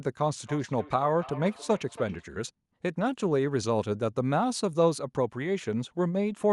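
From 0.45 to 2.28 s there's feedback echo between two devices: the speech returns roughly every third of a second, about 17 dB down, thin and ringy.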